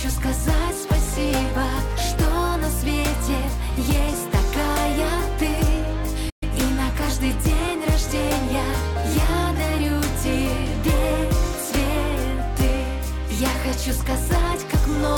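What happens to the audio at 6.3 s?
The player likely ran short of data or had its output thread blocked, causing a playback stall from 6.29 to 6.43 s. The output cuts to silence for 120 ms in mid-flow, leaving an audible gap before the sound picks up again.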